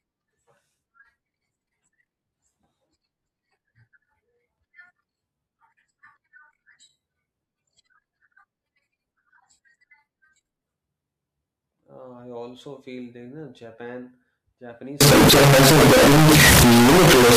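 Speech, running cleanly until 15.01 s, when it turns into extremely loud, harsh distortion lasting to the end at 17.37 s. The likely cause is signed and unsigned mixed up in the 16-bit samples. Unlike clipping, even near-silent moments blast at full level, because every zero crossing becomes a full-range jump.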